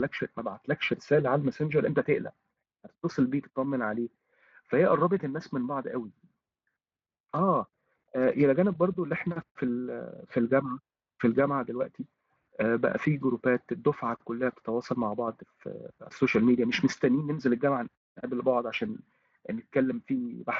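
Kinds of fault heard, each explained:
No faults are heard.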